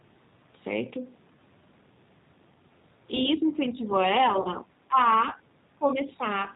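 Throughout, the speech sounds slightly rough and synthetic, with nothing above 4 kHz. This fits G.729 codec damage, which fits an 8 kbit/s G.729A stream. Here the voice is rebuilt from a vocal tract filter, a pitch predictor and a few pulses per frame rather than the actual waveform.

From 4.42 to 4.48 s the sound turns briefly buzzy and smeared, then fades. This is VoIP packet loss concealed by the speech codec. About 30 ms of audio went missing, which fits a single lost packet. The decoder filled the gap by repeating its last pitch and filter at falling gain.

From 4.88 to 4.97 s the voice drops by about 20 dB, and from 5.79 to 6.24 s it sags again by about 10 dB. Both dips are likely speech suppressed in double talk. The echo canceller, faced with both sides talking at once, turned the talker down along with the echo it could not separate.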